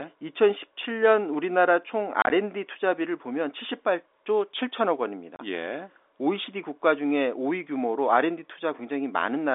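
Packet loss filled with silence chops the speech at 2.22 to 2.30 s, losing about 50 ms in short gaps, and at 5.36 to 5.39 s, a 30 ms gap. Missing packets became hard-edged silence. The gap sizes fit 10 ms packets.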